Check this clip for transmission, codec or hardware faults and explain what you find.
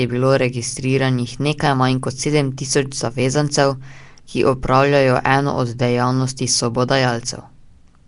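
One codec fault runs the full length of the speech: a rough, hissy halo and a smeared, underwater quality, with nothing above 10.6 kHz. This is likely Nellymoser compression, whose fixed two-bits-per-sample blocks starve weak bands and fill them with noise.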